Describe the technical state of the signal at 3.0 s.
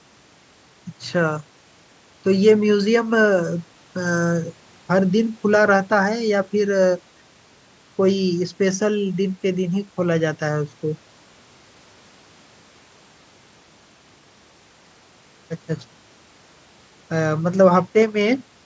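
At 3.0 s the signal is intact, with only the ordinary call microphone processing, which trims the lowest bass and leaves nothing above 8 kHz.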